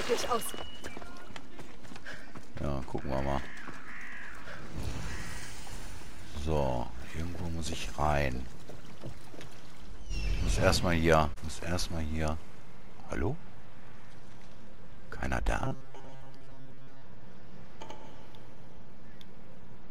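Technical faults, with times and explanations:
1.30 s: compressed frames skipped. About three 26.1 ms frames vanish, a jump of roughly 70 ms.
15.60–17.02 s: robotic sound from repeated short buffers. A rigid metallic 134 Hz buzz still loosely follows the sound's shape. The cause is likely a 7.5 ms buffer replayed over most of this stretch.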